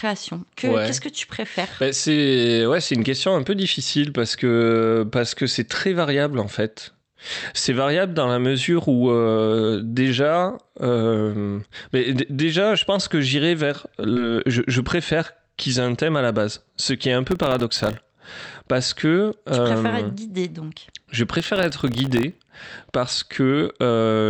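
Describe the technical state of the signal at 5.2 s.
At 5.2 s the speech comes through intact, with no dropout, glitch or distortion, carried by the call path's Opus coding, which band-limits it at around 8 kHz.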